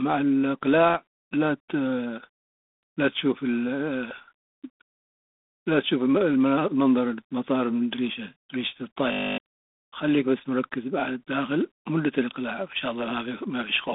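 Throughout, the speech has been through G.726 ADPCM coding. Rather than sending the waveform itself, the codec sends a few bits per sample describing how far the signal strays from an adaptive prediction. The coarseness of the damage fits the 24 kbit/s mode, at 3 bits a sample. The line band runs from about 200 Hz to 3.6 kHz, and nothing passes above 3.8 kHz, so the speech sounds muffled and telephone-thin. Over it sits a plainly audible rasping hiss that rises and falls with the speech level.

From 9.12 to 9.38 s, a system hang loop takes over. The machine or its audio driver stalled while the sound hardware kept replaying the same small stretch of its ring buffer. A 20 ms slice repeats thirteen times, which produces a steady buzz at 50 Hz in place of the speech. Around 0.3 s of real audio is lost. Normal playback resumes just before "خليك بس مركز".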